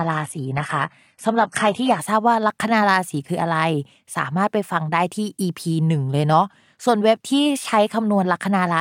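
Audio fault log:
0.00–2.00 s adaptive stream starting at a low bitrate: the player opened on a low-bitrate version, consistent with HE-AAC near 16 kbit/s, until it had measured the connection. The speech has synthetic, smeared treble and heavier codec artefacts, with nothing above 11.8 kHz. At 2.0 s quality jumps, without a gap, to what fits AAC-LC at 96 kbit/s.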